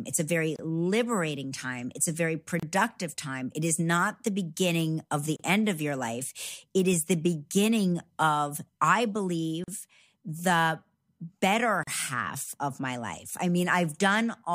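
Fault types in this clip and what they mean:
Gap at a join of encoded pieces: The speech was encoded in separate pieces and joined without trimming. Each piece keeps the encoder's start-up delay and the padding of its last frame as silence. Five short dropouts result, at 0.56, 2.60, 5.36, 9.64 and 11.83 s. Each lasts from 27 to 40 ms and grows slightly longer through the clip. The codec smears their edges. The speech resumes exactly where it broke off.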